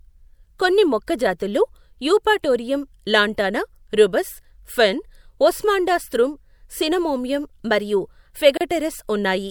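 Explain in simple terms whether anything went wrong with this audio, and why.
A gap at a join of encoded pieces opens at 8.57 s: about 34 ms of silence where two separately encoded sections of speech were joined untrimmed.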